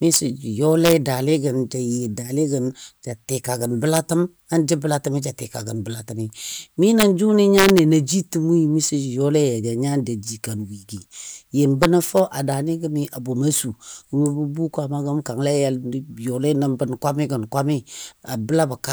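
Integer overflow cracks at 0.14–0.16, 0.85–0.93, 3.94–3.98, 6.83–7.03 (after "ja tika gən bəlatəmi"), 7.57–7.79 and 11.83–12.2 s (before "a daani"): speech peaks about 1–3 dB over full scale wrap to the opposite sign instead of limiting, producing violent cracks far harsher than clipping.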